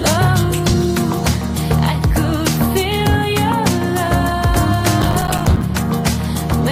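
From 5.02 to 5.62 s, processor overload crackle: the processor misses many short buffer deadlines in a row, leaving about 20 tiny silent gaps that sound like a gritty crackling burst.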